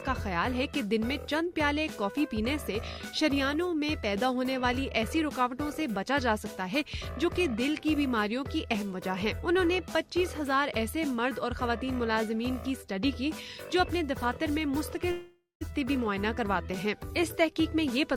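A long network dropout interrupts the audio from 15.11 to 15.63 s, with about half a second of sound missing. The last sound before the gap is stretched into a fading buzzy hiss, which leaves about 140 ms of near-silence before the audio resumes further on. On a spectrogram this shows as smeared, blurred bands that dim into an empty strip. The waveform decays to a flat line, then jumps back abruptly. The likely cause is lost packets that the receiver concealed.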